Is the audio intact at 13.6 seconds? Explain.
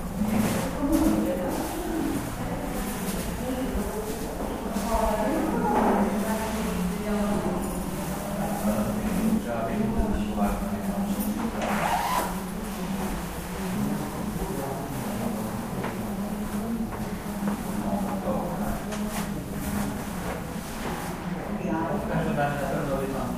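Yes, the audio is intact at 13.6 seconds, with no dropout, click, distortion or other fault at that moment.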